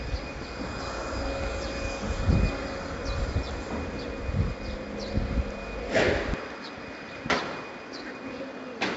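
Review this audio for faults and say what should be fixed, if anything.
4-bit ADPCM compression, throughout the clip. Each sample is coded as a coarse 4-bit step from a predicted value, so the error becomes a gritty hiss that rises and falls with the sound, and sharp attacks smear where the step size cannot grow quickly enough. The damage here is heavy, and nothing reaches above 7.7 kHz, which fits 4-bit coding at 64 kbps on roughly 16 kHz sampling. Record or deliver in a higher-resolution format such as 16-bit PCM or a modern perceptual codec at an adequate bitrate.

Input switched to a poorer device, from 6.34 s to the end. At that point the sound narrows abruptly, with nothing above 6.5 kHz, so it turns duller and more boxy. It also drops by around 5 dB, and a new background noise appears, roughly 55 dB below the signal. There is no gap at the change. This most likely comes from the recording system moving to a different or lower-grade input partway through. 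Lock the input device for the whole session and disable automatic switching, such as to a headset's call profile.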